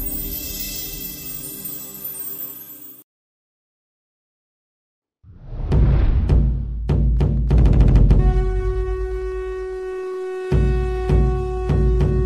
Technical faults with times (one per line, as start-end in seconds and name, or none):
7.08-12.25 Wi-Fi interference